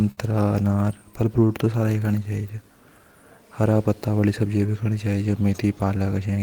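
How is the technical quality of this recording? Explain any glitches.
The recording has timing problems caused by a network link whose two ends disagree on speed.

Clock drift between sender and receiver runs throughout the clip. The sender's clock runs roughly 5% slow, so the receiver's buffer keeps draining and the pace wavers unevenly.

A short stall from a late packet occurs between 0.11 and 0.20 s. A packet arrived late, so the receiver held the last sound for 59 ms, producing a brief smeared sustain with nothing lost.

Repeated timing corrections run from 1.39 to 6.32 s. The receiver keeps repeating small pieces to keep up with the slow sender, adding about 200 ms overall. This is heard as faint hiccups and a tempo that runs at 95% and unevenly.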